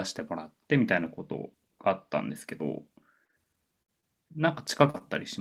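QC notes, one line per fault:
3.25–3.34 s, short concealed packet loss (two back-to-back): about 60 ms went missing and was patched by extending the last sound, heard as a smear; on the spectrogram the patch looks flat and repeated.
3.82–3.90 s, burst of packet loss: 60 ms never arrived. The concealment holds the last sound as a fading buzz or hiss for about 55 ms, then jumps ahead, so the waveform tapers before an abrupt resume.
4.00–4.04 s, short concealed packet loss: a 20 ms hole filled by continuing the previous sound, heard as a brief smear or wobble; a thin, copied-looking slice appears on the spectrogram.
4.90–5.02 s, short concealed packet loss (two close together): roughly 40 ms, then 20 ms, lost and bridged from the preceding sound, giving a double wobble; two repeated, smoothed segments show in the waveform.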